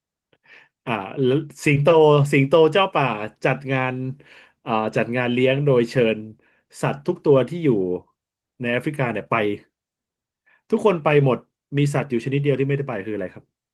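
Nothing stood out as a fault on listening to this speech.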